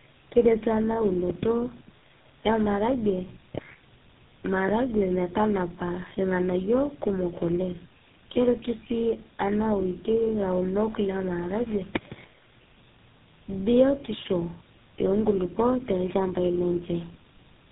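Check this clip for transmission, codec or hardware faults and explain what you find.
One fault, and it's there for the whole clip: tandem speech coding. The speech sounds like it went through four speech codecs in a row, most likely ending on GSM full rate, with each coder re-encoding the previous one's damage. The result is rough, muffled and warbly, with nothing above 3.8 kHz.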